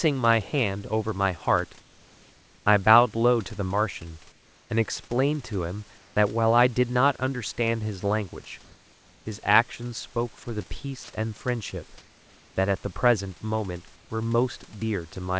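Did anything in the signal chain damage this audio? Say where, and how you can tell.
Yes. In the pauses of this speech, the room's background gives way to a smoother, featureless hiss, about 2 to 4 dB quieter, at 1.80–2.66, 4.32–4.70, 5.98–6.16, 8.64–9.26, 11.98–12.56 and 13.96–14.10 s. This is comfort noise in place of the background, a call-processing fault. The sender most likely stopped transmitting during the gaps, and the receiver filled them with synthetic noise that only roughly matches the real room sound, which sits about 32 dB below the loud parts.

At 11.04–11.08 s, a 40 ms piece of the sound itself vanishes into that same steady noise and then returns. This is sound dropped by the voice detector, also at the call-processing stage. The detector likely judged that brief stretch to be background, so transmission paused and the receiver played comfort noise for those 40 ms. Throughout the clip, the call codec's bandwidth leaves nothing above 8 kHz.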